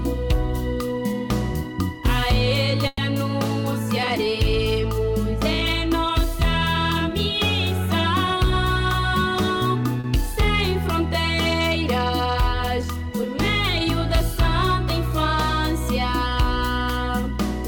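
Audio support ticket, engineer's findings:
Call audio freeze, 2.87 to 3.01 s. Last sound continued as a fading buzz or hiss for about 110 ms, brief near-silence of about 10 ms, then resumes where it left off, nothing lost, playout 110 ms later. Likely held-up packets draining the jitter buffer. Spectrogram: smeared, repeated harmonic band decaying to a thin dark strip. Waveform: repetitive low-detail segment tapering off.

Jitter buffer speed-up, 9.22 to 9.95 s. Audio runs about 8% fast at unchanged pitch, sounds hurried. Receiver trimming excess buffered audio by cutting out short pitch-period pieces repeatedly, roughly 70 ms removed in total. Spectrogram: harmonics hold their frequency but events crowd closer in time. Waveform: periodic cycles with tiny splice points, segment visibly compressed against surrounding timing.

Short stall from a late packet, 10.00 to 10.07 s. One sound held too long, slight buzz or dip, about 40 ms stretched in, nothing missing, playout shifted 40 ms later. 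Jitter buffer empty when packet due, last sound extended until arrival. Spectrogram: brief frozen horizontal smear of the preceding harmonics. Waveform: short run of near-identical cycles before normal flow resumes.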